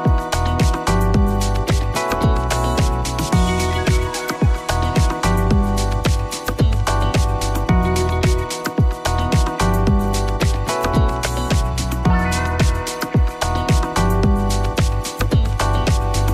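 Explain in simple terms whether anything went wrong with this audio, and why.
Nothing went wrong here.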